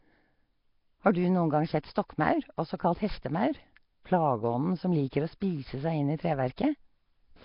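Throughout the recording, the signal appears to have passed through a heavily squeezed low-rate coder, most likely Nellymoser compression of the kind Flash used for microphone input, with damage consistent with a rate near 22 kbps. Spending so few bits per sample leaves weaker frequency bands unfunded and patched with noise, so the speech carries a rough, hissy halo and a smeared, underwater character. Nothing survives above 5.3 kHz, which dulls the top end.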